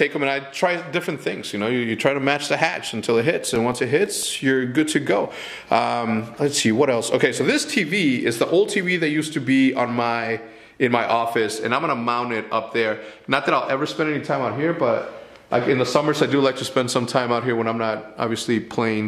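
From about 2.71 s to 4.56 s there's a run of CD scratch ticks, a dozen small clicks at roughly six or seven a second, each only a few milliseconds long. That steady spacing is the giveaway: a scratch or blemish on the disc wipes out more data than error correction can recover, once per revolution, so the player patches or mutes those samples and you hear a tiny tick each time that spot comes round.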